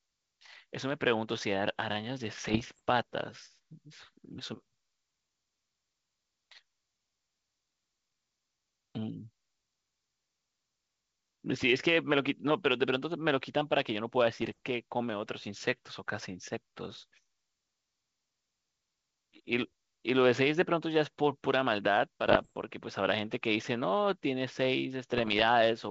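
Bit errors on the ADPCM link, at up to roughly one percent, derail the decoder's step size and predictor, causing pops and rough bursts at 2.38–2.82, 14.42–14.59, 22.26–22.53 and 25.18–25.42 s, over wideband G.722 coding that suggests 64 kbit/s.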